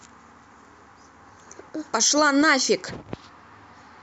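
From 0.12 to 4.01 s, clock slip clicks rattle softly every 30 ms or so, likely unsynchronised clocks slipping single samples. Their even spacing distinguishes them from random dropouts.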